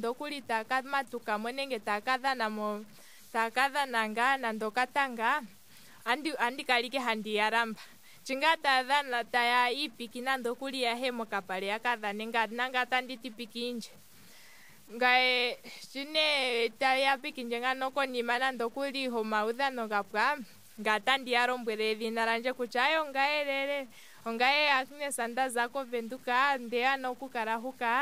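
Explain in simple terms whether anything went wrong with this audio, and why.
Something likely went wrong when the recording was stored: it kept too few steps of loudness, which points to about 8 bits, and cut values off without dither. This low bit depth without dither makes the speech grainy for the whole clip, worst in quiet moments.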